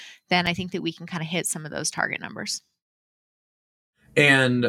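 A speech clip with two blocks of digital silence. At 0.46 s, just before "I think that we", the audio drops to silence for about 5.3 ms. That fits a 256-sample buffer. At 1.98 s, right after "hit some of those", a 1.1 ms gap follows. Each block cuts in and out with no fade. Both are heard as a tick or dip. The output buffer was likely not filled in time.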